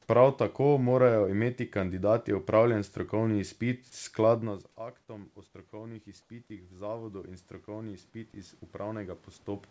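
From 3.3 s, just after "morajo imeti kandidati opravljen", automatic gain rising sets in and runs to the end. The gain control judged the input too quiet and kept turning it up. Speech and room noise swell together, slowly and steadily.

At 6.22 s, for 80 ms, comfort noise replaces the background. The real room sound, about 46 dB below the loud parts, gives way to a flat, featureless hiss about 1 dB quieter. The likely cause is discontinuous transmission, with the receiver filling the gap with synthetic noise.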